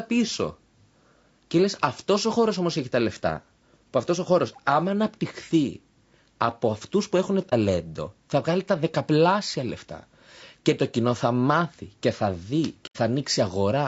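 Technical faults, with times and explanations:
Throughout: low-delay AAC compression. The speech sounds plainly rough and grainy, which points to a low-delay codec, likely AAC-ELD at about 32 kbps. At this bitrate it leaves noise between the pitch harmonics, so a spectrogram shows noise filling the gaps between them and a thin, patchy top band.
7.50–7.54 s and 12.86–12.97 s: AAC frame loss with muting. After "από αυτού που έχουν" about 30 ms of sound vanishes, which fits one lost frame. After "μάθει και θα δει" about 90 ms drops out, which fits three. The decoder zeroes the missing spectrum, and the overlapping windows fade the sound out and back in, leaving a brief dip and then a soft-edged hole. The waveform dips smoothly to silence, and the spectrogram shows blank vertical gaps.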